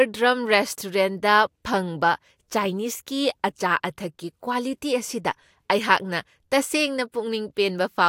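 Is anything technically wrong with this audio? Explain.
No, nothing in this speech recording points to a technical problem with how the signal was captured, processed or delivered.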